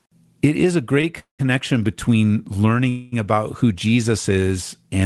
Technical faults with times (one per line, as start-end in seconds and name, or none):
1.01-1.05 short stall from a late packet
1.19-1.41 call audio freeze
2.89-3.14 call audio freeze